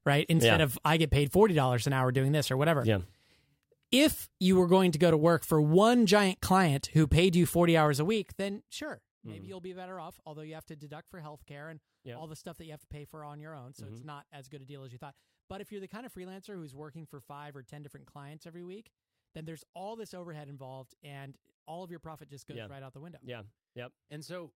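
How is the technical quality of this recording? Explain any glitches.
One glitch stands out in this speech recording. From 7.82 to 9.17 s, a fast ticking, zipping texture rides on the voice as the level falls by roughly 20 dB. This is zipper noise. This fade moves in abrupt 2 dB steps about ten times a second, and each unsmoothed jump leaves a small click.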